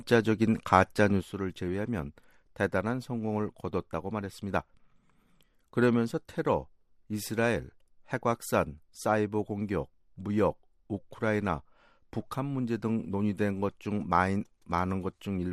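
One channel drops out at 1.21 s and stays gone to the end: the level falls abruptly by about 6 dB, and anything carried only on that side vanishes, most likely because one stereo channel was lost before the mono sum.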